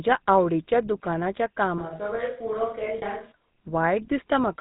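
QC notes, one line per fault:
throughout: GSM full-rate codec, buzzy gravelly roughness and nothing above 4 kHz, from pulse-driven vocal-tract coding at about 13 kbps, plainly audible.
2.98–3.03 s: lost GSM frames, a brief rough metallic ring where the last good frame is repeated, about 40 ms, fitting two lost frames.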